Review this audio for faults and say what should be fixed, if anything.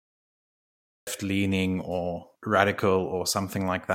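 The capture started late: the recording or stream wasn't running when the talker began, so the first stretch was never taken in. That is a cut-off start. The clip holds digital silence from 0.00 to 1.07 s, then speech switches on abruptly at 1.07 s in the middle of a sound, with no natural attack or fade-in, just before "leaning or". To prevent it, arm and start the recorder or stream well before the talker begins, keeping a short pre-roll buffer.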